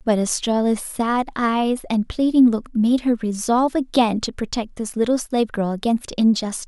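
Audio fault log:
No faults heard anywhere in the speech.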